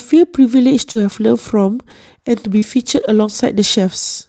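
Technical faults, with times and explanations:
0.91–0.97 s and 2.58–2.64 s, short concealed packet loss: a brief smear or wobble, where the sound seems to stretch instead of moving on. About 40 ms of audio arrived too late each time, and the receiver filled roughly 38 ms by extending the preceding sound, carrying its pitch forward or shaping noise, before blending back. A quick consonant inside such a gap can drop out entirely.
0.95–0.97 s, 1.13–1.16 s, 1.68–1.70 s, 2.62–2.64 s and 2.96–2.98 s, lost packet rebuilt from error correction: short patches of about 20 ms that sound grainier and noisier than their surroundings, with no gap. Each lost packet was replaced by a low-bitrate copy carried in the following packet, and that copy codes the sound more coarsely. At 0.95 s and 2.62 s it finishes off the concealed stretches above. At 1.13 s the rougher patch runs about 8 ms longer. The audio tops out near 8 kHz, which points to a wideband call codec setting.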